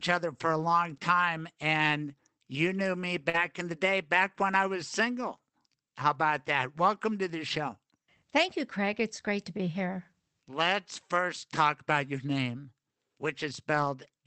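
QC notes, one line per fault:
3.29–3.36 s, short concealed packet loss: About 40 ms of audio arrived too late for the decoder, so the receiver extended the preceding sound for roughly 42 ms and then blended back into the real signal. This is heard as a brief smear or wobble in the speech.
3.34–3.36 s, lost packet rebuilt from error correction: One 20 ms packet was lost, and the decoder played the low-bitrate copy carried in the following Opus packet instead. There is no gap, but the rebuilt frame sounds rougher and noisier than its surroundings.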